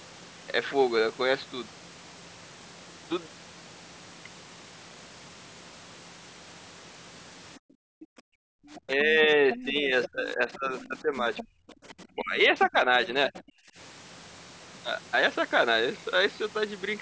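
From 7.58 to 8.57 s the background is gated by the echo canceller: with the loudspeaker active, it pulled the microphone down by about 40 dB, so the room tone drops out for roughly a second. It happens again at 11.53 to 11.79 s, by about 29 dB. Only the ambience vanishes, which separates this from a network dropout.

A faint second voice, the other side's voice leaking through, appears at 8.75 to 8.8 s, then at 9.5 to 12.06 s and 13.05 to 13.42 s. It is roughly 15 to 25 dB below the talker, likely loudspeaker echo the canceller failed to remove. It is not crosstalk from another line.

At 8.85 to 11.25 s and 12.1 to 13.53 s the talker's own voice is pushed down by around 15 to 20 dB in pieces while the far side plays on the loudspeaker. This is speech suppressed in double talk, likely the canceller attenuating both voices when it could not tell them apart. Unlike gating, the speech itself is cut.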